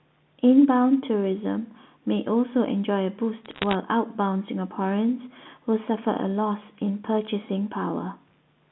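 From 3.45 to 3.75 s there's a burst of bit errors on a digital phone line: flipped bits in the mu-law samples, at a fraction of a percent, produce sharp ticks and crackle over the speech.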